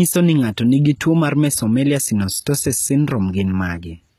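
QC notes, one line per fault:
Throughout, HE-AAC compression, likely: the treble is plainly damaged, with s sounds turning gritty and metallic while staying bright, and nothing above 14.9 kHz. That brightness separates it from plain low-pass band-limiting: the upper band is rebuilt from copied lower bands, pointing to roughly 20 kbps.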